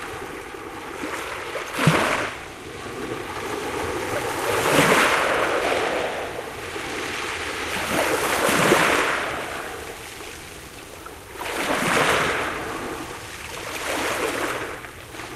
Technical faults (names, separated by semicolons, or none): none